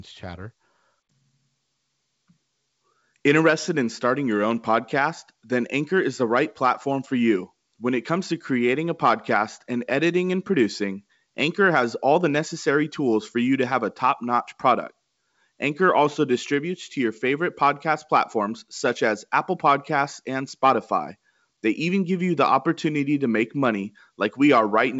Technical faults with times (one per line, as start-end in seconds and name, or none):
none